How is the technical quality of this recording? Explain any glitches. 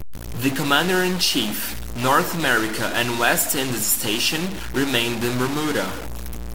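Not great: there's a harsh, buzzy distortion riding on the speech the whole way through. That points to a stuck bit, likely a data line or converter bit frozen at one value. Roughly half the samples jump by a step around -25 dBFS, so the grit follows the waveform and even the pauses fill with a fairly loud hiss-like noise.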